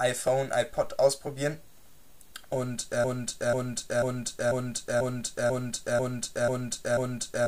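At 3.04 s the audio locks into a broken-record loop: a fragment of about 0.49 s repeats exactly, back to back, nine times, and the loop runs to the end. Whatever should have followed is never heard. The likely cause is a stalled player, encoder or stream that kept resending its last buffered piece. On a waveform the same shape recurs at a fixed interval, and a spectrogram shows identical blocks tiled evenly across time.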